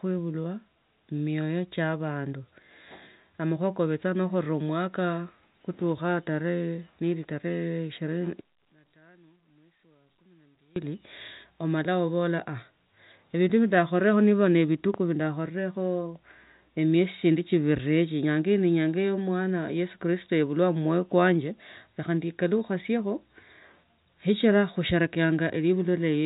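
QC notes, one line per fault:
8.41–10.76 s, one channel inverted: the speech drops by about 23 dB. The likely cause is reversed polarity on one stereo channel. The centred content shared by both channels cancels when they are summed to mono, leaving only their faint difference.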